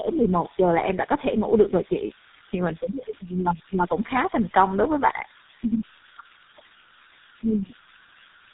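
Throughout the speech, converter idle tones add a whistle around 1.5 kHz, about 20 dB below the speech. Its steady pitch in pauses sets it apart from broadband hiss. Tandem speech coding is also present throughout: rough, muffled, warbly speech with nothing above 3.8 kHz, pointing to two speech codecs in a row, G.723.1 then GSM full rate, rather than one lossy pass.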